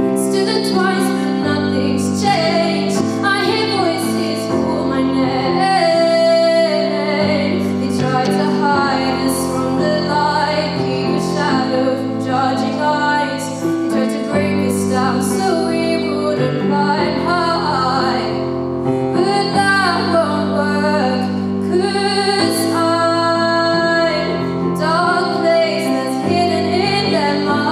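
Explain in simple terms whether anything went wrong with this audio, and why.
Nothing went wrong here; no problems can be heard.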